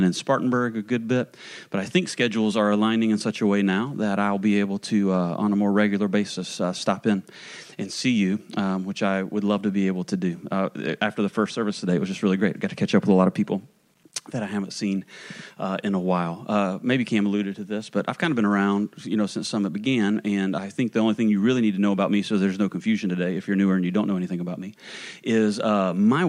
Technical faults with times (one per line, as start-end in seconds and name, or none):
0.00-26.28 low bit depth without dither